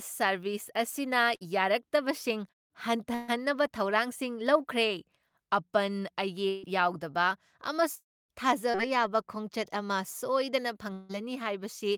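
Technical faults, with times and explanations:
1.35–1.43 s, 3.15–3.37 s and 6.49–6.65 s: burst of packet loss. In each case a run of consecutive packets failed to arrive in time. The decoder extended the last sound and let it decay. That produces a held buzz or fading hiss lasting about 50 ms, 130 ms and 140 ms respectively. Speech then resumes with about 60 ms, 140 ms and 140 ms of material gone. The second gap also stretches the timeline by about 8 ms.
7.95–8.17 s and 10.93–11.11 s: long network dropout. The first begins with roughly 100 ms of synthesized continuation that decays away, then about 100 ms of silence before speech returns. About 200 ms of the original is lost. The second is a roughly 160 ms fading fill with no silent stretch, replacing about 160 ms of speech. The cause is likely a stall in the network path long enough to exhaust concealment.
8.71–8.77 s: short concealed packet loss. 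About 40 ms of audio never reached the decoder. Around 30 ms of extrapolated signal bridges the hole and cross-fades back into the real stream. It is heard as a brief smear rather than a clean gap. The fill runs slightly long, nudging later audio back by about a hundredth of a second.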